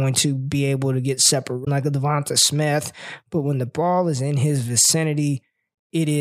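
Damaged data in a compressed stream breaks this speech clip twice: a break from 1.61 to 1.68 s, after "be able to get" and before "like a", and a brief blip at 4.91 s after "ball is in his". Corrupted bytes knock the decoder out of sync until it finds the next frame header.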